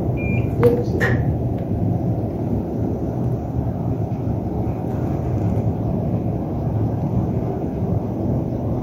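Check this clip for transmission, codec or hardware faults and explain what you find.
Nothing here points to a transmission, codec or hardware problem; the everyday sound comes through steady and unbroken, with nothing to flag.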